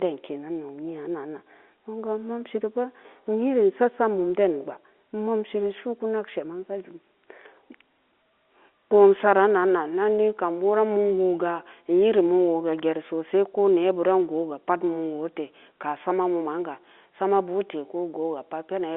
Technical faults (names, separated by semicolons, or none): none